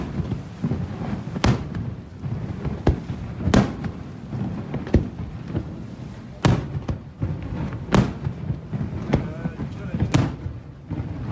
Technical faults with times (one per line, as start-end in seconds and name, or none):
none